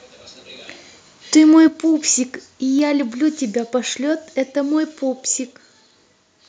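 Microphone overload from 1.37 to 1.59 s: the loudest peaks of the speech press about 1 dB past the converter's ceiling and have their tops sheared off. Only a small fraction of samples is flattened, but it adds a harsh, crackly edge, likely from an input volume set too high.

Microphone volume stepped down at 1.68 s: just after that distorted stretch, the speech and the background both drop suddenly by about 6 dB in a single step. This is likely the call software reacting to the clipping by cutting the device's input gain.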